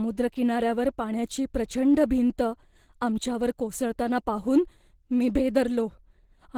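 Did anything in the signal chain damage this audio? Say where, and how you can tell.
Yes. The damage sits at the codec stage, across the whole clip. The speech sounds muffled and hoarse throughout, yet content still reaches 20.2 kHz. That points to Opus compression, likely in hybrid speech mode, starved of bits at a rate near 16 kbps.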